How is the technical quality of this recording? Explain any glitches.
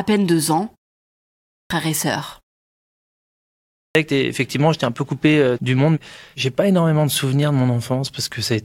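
Twice, the audio resumes after a pause with its opening missing, a clipped start after a pause. At 1.06 s, after "peine deux ans" and a 0.38 s gap, about 0.64 s is swallowed before "et sœurs". At 3.30 s, following a 0.97 s gap, another 0.65 s vanishes before "et effectivement j'étais un". The output device drops into a low-power state during silence and needs time to wake and relock, so speech begins abruptly, without its first sounds.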